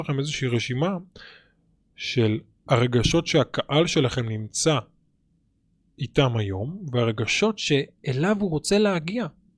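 From the start to about 7.3 s, the speech runs slightly slow and sits low, about 1.5 semitones flat at roughly 0.92 times normal speed. This is a wrong sample rate: playback ran slower than recording, consistent with 24 kHz material clocked out at 22 kHz.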